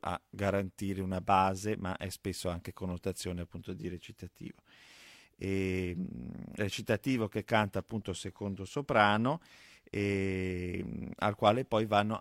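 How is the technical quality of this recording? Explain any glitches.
No technical faults can be heard anywhere in the recording, and the signal stays intact throughout.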